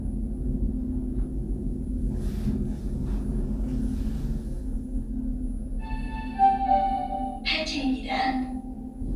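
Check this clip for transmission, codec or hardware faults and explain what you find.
No transmission, codec or hardware faults can be heard in this recording of sounds. Nothing in it points to a problem anywhere along the signal chain.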